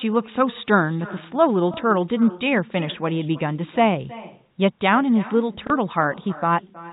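Throughout the speech, the far end is playing the call over a loudspeaker and nothing strips that sound back out of its microphone, so this is echo with no canceller. Every phrase returns roughly a third of a second later, sitting about 19 dB below the direct speech as a quieter, thinner double. Because the path runs through G.711 telephone coding, the echo also carries the narrow band that cuts off at 4 kHz.

At 1.74 to 1.77 s, and again at 5.67 to 5.70 s, the stream shows packet loss with last packet repeated. Each gap of about 30 ms, consistent with a single lost packet, was filled by replaying the preceding chunk of audio instead of fresh data. Each single repeat gives a small blip.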